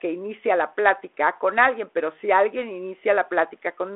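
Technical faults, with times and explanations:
No faults found; the speech runs through G.726 ADPCM at 32 kbit/s in a 300 Hz to 3.4 kHz telephone band, with nothing above 3.8 kHz and only the light coding texture expected at that rate.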